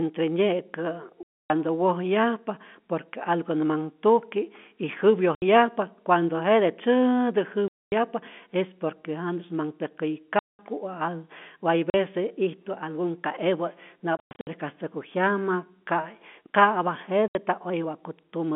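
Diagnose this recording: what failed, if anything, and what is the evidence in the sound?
Network stage, packet loss filled with silence: hard-edged gaps occur at 1.23, 5.35, 7.68, 10.39, 11.9, 14.17 and 17.28 s, lasting 40 to 270 ms. Every length is a multiple of 10 ms, which fits 10 ms packets replaced by plain silence.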